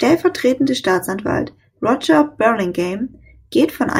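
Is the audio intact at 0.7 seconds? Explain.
Yes, at 0.7 seconds the speech plays through intact, with no audible fault at that moment.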